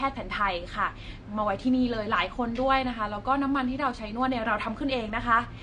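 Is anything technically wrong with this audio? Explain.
Yes. Throughout the speech nothing sounds above about 9.8 kHz, and sibilants carry a fizzy, warbling smear. This is likely AAC compression at a low bitrate, around 32 kbps: the coder trims the top band and coarsely quantises the rest. A plain low-pass filter would sound dull but clean, without this grainy texture.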